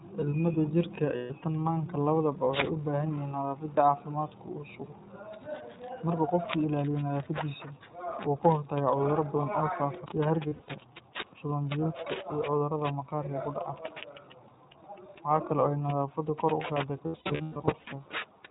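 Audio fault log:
throughout: iLBC codec. Independent frame-by-frame excitation coding, which fits a 15.2 kbps mode with 20 ms frames, removes everything above 4 kHz and leaves speech plainly rough and synthetic.
10.05 s: CD skip. Just after "cudurro badan oo faafa", the laser jumped tracks, so a very brief mute and tick occur before the sound resumes from another point.
1.16–1.32 s, 10.48–10.69 s, 17.06–17.88 s: lost iLBC frames. Missing packets leave the decoder repeating the last pitch cycle mixed with noise, which sounds like held, buzzy vowels. The first loss runs 140 ms before "tan maanka labadaba waxay". The second loses 140 ms scattered across 200 ms after "badan oo faafa sida", with runs up to about 70 ms. The third loses 520 ms scattered over 800 ms, with runs up to about 150 ms, fading across the longer gaps.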